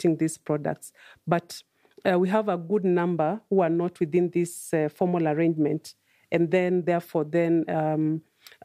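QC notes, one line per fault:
No faults to note in the QC check of this speech clip.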